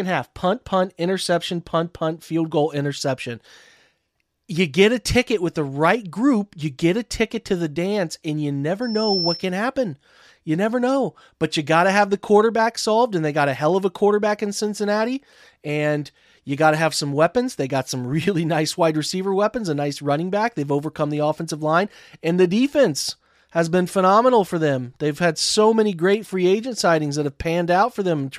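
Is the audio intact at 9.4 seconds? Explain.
No. From 8.82 to 9.50 s, loudspeaker feedback squeal: the microphone re-amplifies its own loudspeaker, so a 5.4 kHz tone swells within about a third of a second to roughly speech level, showing as one bright horizontal spectrogram line.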